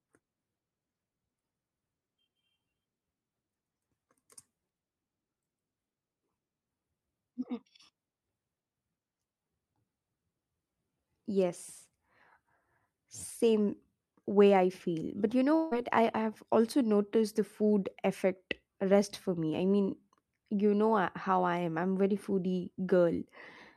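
Right after "you know", at 15.55 s, the speech smears into a brief buzzy tail that fades over roughly 0.16 s, and then the talker picks up again at 15.73 s with a small chunk of speech simply gone, about 160 ms. There's no real silence in between, just that smeared fill. This is likely a long network dropout: the packets stopped arriving, and the receiver papered over the hole by stretching out the last sound until real audio turned up again.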